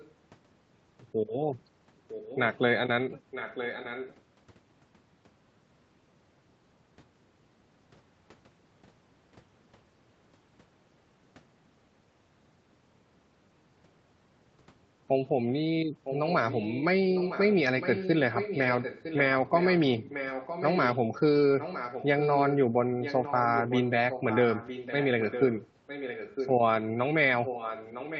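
Echo leak appears at 0 to 0.12 s, 2.08 to 2.58 s, 3.31 to 4.16 s, 16.04 to 20.99 s, 21.59 to 26.53 s and 27.39 to 28.2 s. A second copy of the speech trails the original by 958 ms. It starts very quiet, about 25 dB down, and grows to about 10 dB below the speech. The likely cause is a loudspeaker at the far end, where the echo canceller let part of the call back through.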